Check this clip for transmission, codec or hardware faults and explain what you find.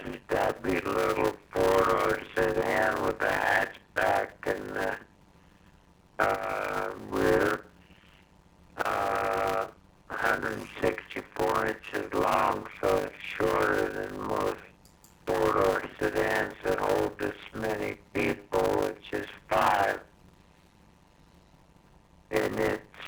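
There is one fault, a padded block size mismatch, present for the whole clip. One stage hands over shorter blocks than the next stage reads, and each block is topped up with silence. This puts a gap in every block, heard as a steady 100 Hz buzz. The audio plays at 0.533 times normal speed but keeps roughly its normal pitch, which fits 256-sample blocks being read as 480-sample blocks.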